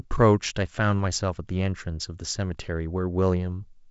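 No technical faults are audible.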